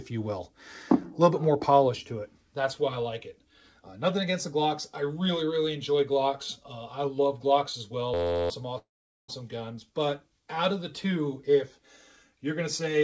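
The audio comes through a call path with nothing above 8 kHz, which points to a wideband call codec such as G.722, and it carries two distinct faults close together. From 8.14 to 8.50 s there is a system hang loop: an 11.61 ms slice repeats exactly 31 times, giving a steady buzz at 86.1 Hz, which fits a 512-sample buffer cycling while the system stalled. About 400 ms of audio is lost across it. That exact, unchanging repetition and the missing audio set it apart from the second fault. From 8.78 to 9.30 s a call audio freeze fills 505 ms. The last sound is stretched and fades, with the final 440 ms silent. It is likely caused by delayed packets draining the jitter buffer. Unlike the loop, the fill decays rather than repeating identically, and when playback resumes it continues exactly where it stopped, with nothing missing, only a 505 ms delay added.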